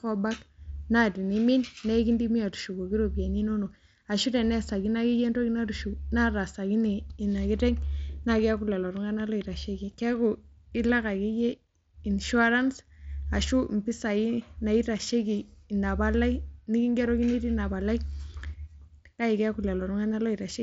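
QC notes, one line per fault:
Nothing to flag here: the speech comes over a Bluetooth mSBC headset link doing its normal job, with the top end stopping around 7.7 kHz as that codec's wideband path does.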